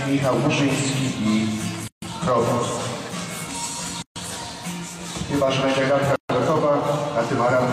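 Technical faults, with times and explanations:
1.88–2.02 s, 4.02–4.16 s and 6.16–6.30 s: gap at a join of encoded pieces. Silences of 144, 136 and 136 ms repeat every 2.0 s. Separately encoded pieces were joined untrimmed, so start delay and end padding remain. Sound drops out, then resumes where it left off.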